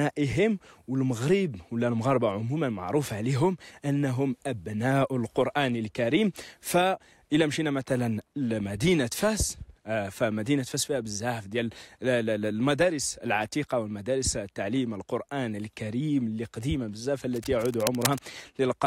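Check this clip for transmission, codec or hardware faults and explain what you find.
One hardware fault appears near the end: cable scratch noise from 17.35 to 18.19 s, dense uneven rustling roughly 10 dB below the sound, likely from a worn connector or cable being moved. Unlike regular digital clicks, the bursts are irregular and grainy.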